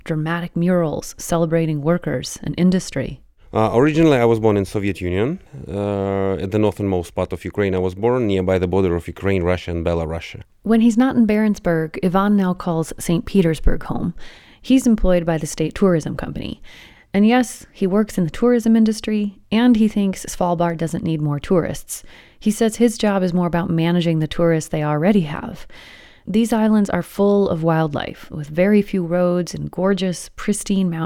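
Nothing in the speech recording stood out as a technical problem on listening.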